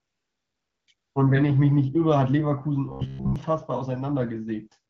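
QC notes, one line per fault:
0.0 to 0.87 s and 0.93 to 1.15 s, AMR comfort noise: the handset judged these stretches silent and stopped sending speech frames, for 874 ms and then 220 ms, so the receiver generated synthetic noise from a coarse level and spectrum description. The true background is swapped for a smooth, steady hiss that switches in, drops out briefly around 0.9 s, then returns, giving the opening an artificial, gated quality.
2.86 to 3.36 s, robotic sound from repeated short buffers: audio apparently arrived too seldom and playback filled the gaps by looping a very short stretch, with roughly 70% of this half-second made of repeats. The looping imposes a fixed 66.8 Hz buzz, which fits a repeated buffer of about 15 ms. The speech becomes a rigid, metallic drone that only loosely tracks the words.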